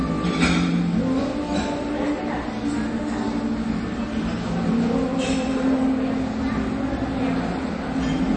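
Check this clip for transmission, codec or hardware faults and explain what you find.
One fault runs through the whole clip: MP3 compression damage, plainly audible from start to finish. Nothing is present above 8.3 kHz. The top end stops dead at that frequency. The audio also has a watery, swirling texture. This is likely a low-bitrate MP3 encode, around 32 kbps. Starved of bits, the encoder dropped the treble at a fixed cut-off. It also zeroed weak frequency lines. Those lines flicker on and off between frames, which causes the swirl. Attacks sound smeared.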